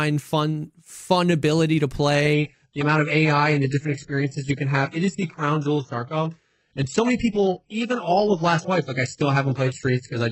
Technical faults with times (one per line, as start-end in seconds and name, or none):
2.33-10.31 adaptive stream at a lower bitrate